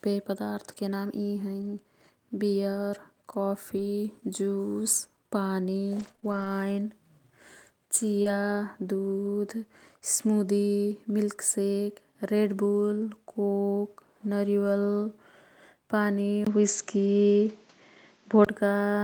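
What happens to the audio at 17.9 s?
At 17.9 s you're inside a stretch from 16.45 to 18.47 s where the input has likely switched to a poorer device. After a brief 20 ms gap the sound goes dull, with nothing above 7.6 kHz, shifts a few decibels in level, and picks up a faint new noise floor.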